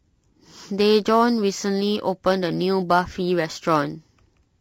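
Throughout the speech, the encoding was likely a low-delay AAC compression of the AAC-ELD kind used for video calls, and the damage is plainly audible. Its short frames cannot separate the pitch harmonics of the voice cleanly, and the quality points to a bitrate around 32 kbps. The voice therefore sounds rough and grainy, with noise filling the gaps between harmonics and a top band that sounds thinned or synthetic rather than natural.

Also present the whole way through is sample clock jitter. The converter's clock wanders by a few microseconds, so each sample is taken slightly early or late. That timing error turns into an amplitude error wherever the waveform changes quickly. It adds a faint hiss or roughness that sits around 35 dB below the speech, grows on loud and bright sounds, and drops away in the pauses.

From 3.53 to 3.57 s there is an AAC frame loss with concealment. A piece of the coded stream went missing, which fits a single lost frame, and the decoder patched the gap by reusing the last good spectrum. 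For that brief moment the sound turns smeared, noisy or phasey, and then normal decoding resumes without any fade to silence.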